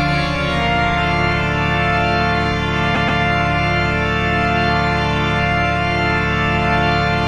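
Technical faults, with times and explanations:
2.94–3.20 s, repeated frames: the same 130.6 ms chunk plays three times running, giving a quick stutter and stretching the audio by 261.2 ms.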